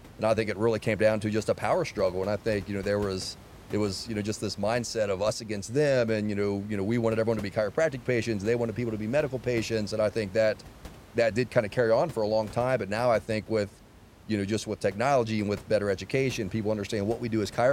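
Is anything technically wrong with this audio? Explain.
No, nothing in this speech recording points to a technical problem, and the only background is the room's own noise, which sits about 21 dB below the speech.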